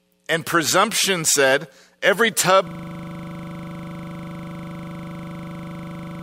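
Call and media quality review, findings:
System hang loop, 2.67 s to end of clip. A single 40 ms slice of speech repeats exactly, 89 times, at 25 Hz. This points to a frozen host or driver while the audio device kept replaying a ring buffer of about 40 ms.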